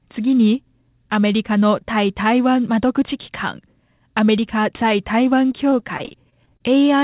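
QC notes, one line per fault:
5.48–6.62 s, repeated packet loss (robotic sound): this stretch breaks up into eleven short dropouts, none longer than about 33 ms, adding up to roughly a quarter of a second. Each hole gets papered over by stretching the last bit of sound, which covers nearly a fifth of the span. That repeated smearing is what gives it the choppy, robotic edge. The band tops out at 4 kHz, which fits a G.711 narrowband call path.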